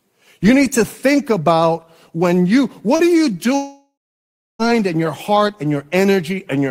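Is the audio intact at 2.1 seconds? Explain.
Yes, the speech at 2.1 seconds is intact, with no audible fault at that moment.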